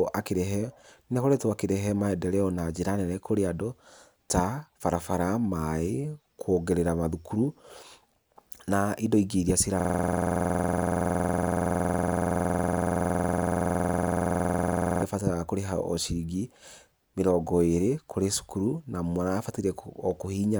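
From 9.80 to 15.02 s a system hang loop repeats one 46.4 ms slice 112 times, a 21.5 Hz machine-gun stutter. This fits a 2048-sample buffer, and it shows as identical repeating waveform blocks and vertical spectrogram stripes.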